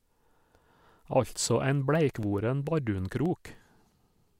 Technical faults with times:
2.23-4.28 periodic USB or driver dropouts

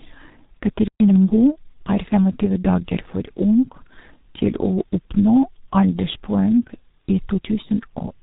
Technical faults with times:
0.00-8.22 G.723.1 codec
0.88-1.00 playback stall
1.00-1.12 time-compressed catch-up

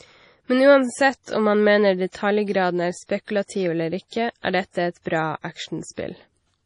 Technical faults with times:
0.00-6.65 MP3 compression

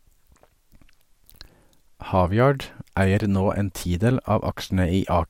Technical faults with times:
1.24-1.63 processor overload crackle

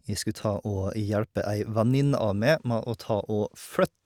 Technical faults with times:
none

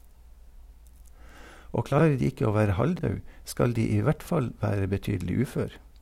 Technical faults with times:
1.92-2.01 chunks out of order
2.97-3.01 chunks out of order

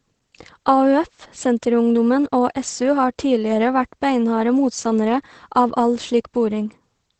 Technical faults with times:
0.00-7.20 Opus voice compression

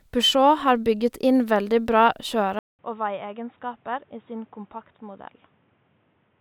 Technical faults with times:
2.59-6.40 input switched to a poorer device

